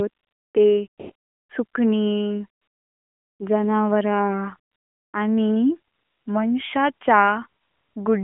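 A speech clip over a narrowband mobile link with AMR comfort noise: during pauses the phone stopped sending speech frames and the receiver substituted smooth synthetic noise at 0.1–0.54, 0.88–1.5, 1.66–1.74, 2.62–3.4, 4.72–5.14, 5.94–6.26 and 7.62–7.96 s, so the background switches to a steady hiss between phrases. The codec's light damage fits AMR-NB at 12.2 kbps.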